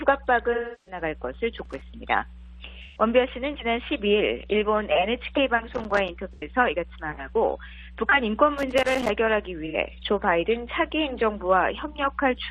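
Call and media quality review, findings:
AAC frame loss with concealment: lost frames patched from the last good spectrum, giving smeared, noisy patches at 0.52–1.02 s (about 0.34 s, fits eight frames), 2.83–3.02, 6.33–6.44, 9.65–9.77 s.

Loose connector crackle: intermittent contact making and breaking, chopping the signal into irregular crackle bursts at 1.58–1.82, 5.74–6.09, 8.58–9.09 s. Check cable and jack.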